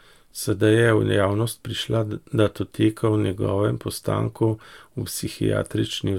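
No technical faults are audible anywhere in the recording.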